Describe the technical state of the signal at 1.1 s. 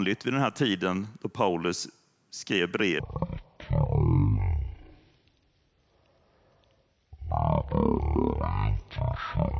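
At 1.1 s the speech signal is intact, with no audible fault at that point.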